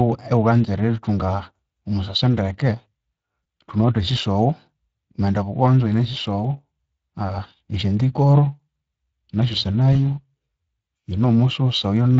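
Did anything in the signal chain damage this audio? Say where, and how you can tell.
Yes. The codec stage is the culprit: Speex coding runs through the whole speech clip, leaving a plainly hoarse, grainy texture because the excitation gets too few bits.

Network stage too: VoIP packet loss concealed by the speech codec at 3.43 to 3.45 s and 9.93 to 9.96 s. Each sounds like a brief smear, consistent with one lost 20 ms frame being extrapolated.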